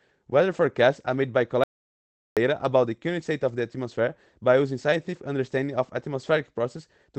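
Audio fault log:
1.64 to 2.37 s, audio dropout to silence: about 0.73 s of dead digital silence with no room tone, likely a lost input, so that stretch of speech is simply gone.
2.55 to 2.65 s, lost packet rebuilt from error correction: no gap, but a brief rough, noisier patch where Opus played lower-quality backup copies, which fits a few lost packets.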